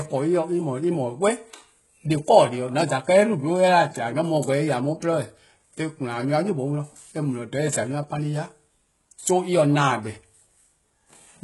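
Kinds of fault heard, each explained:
HE-AAC compression: The speech shows heavy codec damage, and the likely cause is HE-AAC. Nothing sounds above 11.5 kHz. The treble is copied up from lower bands, so s sounds turn gritty and lispy. This points to a very low bitrate, around 12 kbps.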